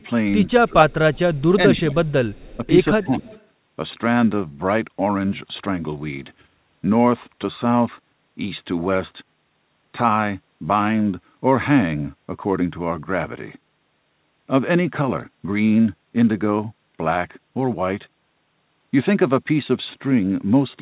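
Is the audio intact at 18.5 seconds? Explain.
Yes, the speech at 18.5 seconds is intact, carried cleanly through the narrowband call path with nothing above about 4 kHz.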